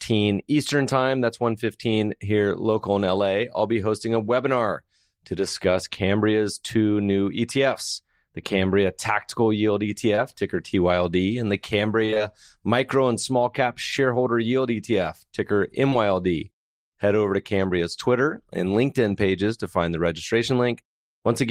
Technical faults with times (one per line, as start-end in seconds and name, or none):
10.15-10.19 short concealed packet loss
12.05-12.22 repeated packet loss (robotic sound)
15.90-15.94 short concealed packet loss